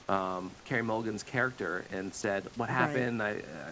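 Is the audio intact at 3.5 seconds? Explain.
Yes, the audio is intact at 3.5 seconds, with only the band-limited sound of the WebRTC call path, which has nothing above 8 kHz, and room noise about 25 dB below the speech.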